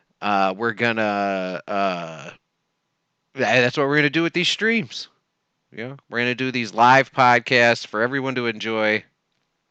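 Nothing in the recording stood out as a technical problem on listening.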